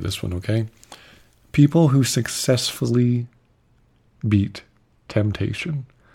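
From 2.90 s to the end, the speech turns dull and muffled: de-emphasis applied wrongly, a treble cut meant to undo pre-emphasis, applied either where there was none or a second time. The slope is smooth, about 14 dB down at 10 kHz relative to 1 kHz, unlike a low-pass filter's abrupt cutoff.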